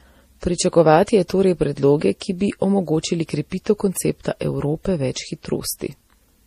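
Throughout, the speech carries layered swirly, smeared artefacts, likely from transcoding between lossy codecs, which fits a low-rate MP3 re-encoded as Vorbis. A spectrogram shows a hard ceiling at 15 kHz.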